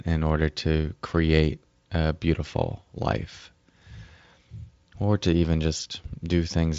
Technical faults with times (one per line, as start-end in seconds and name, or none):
5.77-5.80 VoIP packet loss concealed by the speech codec